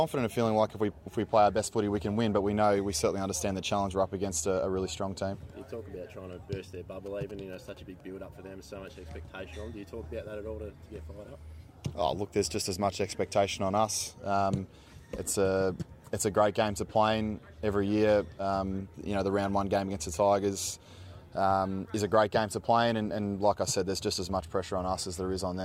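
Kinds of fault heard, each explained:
GSM signalling bursts, 7.06 to 8.01 s: a nearby 2G handset exchanging short control transmissions with its network radiates brief groups of radio pulses, which the audio circuitry rectifies into sound. Here that shows as a galloping dit-dit-dit of short buzzes lasting just under a second, pulsing at about 217 Hz, the GSM frame rate, and sitting roughly 20 dB below the wanted sound.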